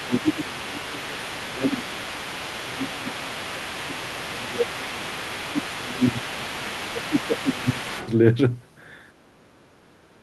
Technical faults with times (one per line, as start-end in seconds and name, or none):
0.00-8.10 other side's voice leaking through
0.01-2.08 speech suppressed in double talk
2.61-5.06 speech suppressed in double talk
5.32-7.91 speech suppressed in double talk